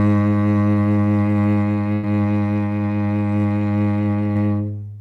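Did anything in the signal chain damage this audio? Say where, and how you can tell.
Yes. Burst of packet loss at 1.93 to 2.05 s, network stage: about 100 ms of the music never arrived, so the receiver extended the last sound, fading it, then resumed further on.

Short concealed packet loss at 4.33 to 4.37 s, also network: roughly 20 ms went missing, and the decoder patched it by continuing the preceding sound, leaving a brief smear before blending back.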